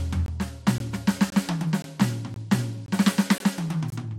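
The music drops out in short, hard-edged holes at 0.26, 0.78, 1.30, 1.82, 2.34, 2.86, 3.38 and 3.90 s, each lasting 20 ms. That's a gap between chunks: silence is slipped in after every half-second block, so the music keeps stuttering on a steady beat.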